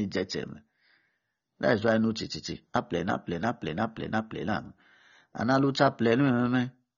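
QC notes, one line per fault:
Throughout, AAC compression: speech is dull and smeared, sibilants warble and fizz, likely AAC-LC squeezed hard, which fits a bitrate around 24 kbps.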